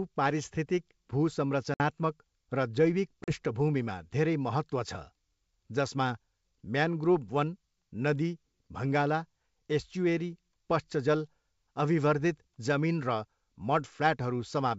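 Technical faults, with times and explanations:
1.74–1.81 s and 3.24–3.33 s, packet loss on an ADPCM call: hard-edged silent holes of about 60 ms and 40 ms, a few packets each. Unlike a plain dropout, the speech returns with brief, slight distortion until the decoder's predictor and step size resynchronise.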